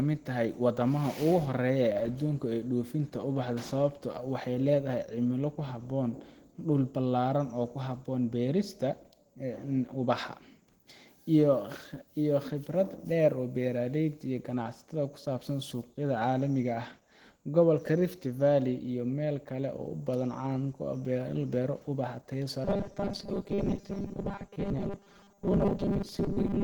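Right from the start, the whole recording carries Opus compression damage, and it's plainly audible. The speech has that hoarse, muffled graininess you get when the encoder is squeezed hard. It fits the hybrid speech mode at a low rate, around 16 kbps. The bandwidth stays fullband, so the dullness doesn't come from a cutoff. It comes from the texture being roughened and filled in rather than coded precisely, which is likely the codec starved of bits.

From 22.64 s to the end at 26.63 s there's a robotic sound from repeated short buffers. The speech turns into a rigid, metallic buzz locked at 200 Hz. That points to a chunk of roughly 5 ms being replayed over and over because new audio wasn't arriving in time. About half of what you hear in that stretch is repeats, with the real audio skipped in between. The buzz still loosely tracks the speech underneath.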